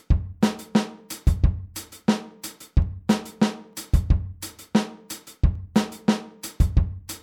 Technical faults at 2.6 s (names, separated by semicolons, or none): clock drift buffer slips